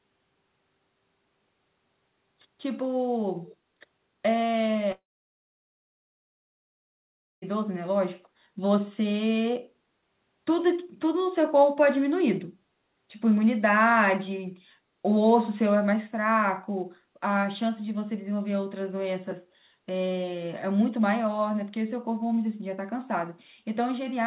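At 3.44 to 3.56 s a faint delayed copy of the speech appears, trailing the original by about 262 ms and sitting well below it in level. This is an echo leak, likely from a far end on loudspeaker whose echo canceller let part of the microphone pickup through and sent it back. It is brief, a short scrap rather than a sustained double, band-limited like the rest of the call audio with nothing above 4 kHz.

From 4.92 to 7.44 s there is a long network dropout, likely caused by about 2.5 s of audio never arriving. The receiver briefly extends the last sound as a fading buzz or hiss, then gives way to roughly 2.4 s of silence. When the audio resumes at 7.44 s it picks up later in the stream, and the missing stretch is simply gone rather than delayed.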